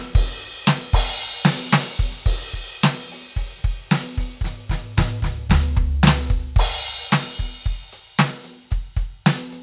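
No technical faults can be heard anywhere in this music.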